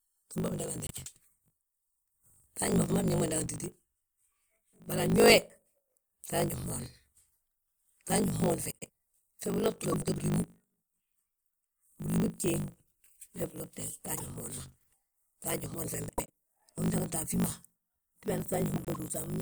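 Throughout the speech, a block size mismatch (truncated) discards each block's tail, leaving a steady 50 Hz buzz and delivery running 1.16 times fast at roughly normal pitch, which fits 1024-sample blocks being cut short. Frames out of order occur at 0.87, 8.71, 9.83 s (after "fe biloti"), 14.15 s (between "wee bilotte" and "fmoon ma"), 16.09 and 18.76 s: swapped halves produce brief garbled flutters, and no time is lost.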